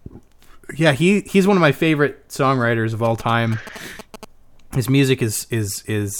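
Speech, with a galloping dit-dit-dit of short 217 Hz buzzes from 3.05 to 4.25 s, just after "my favorite songwriters of", sitting roughly 15 dB under the speech. These are GSM signalling bursts: a nearby 2G phone's short radio bursts, rectified by the audio circuitry.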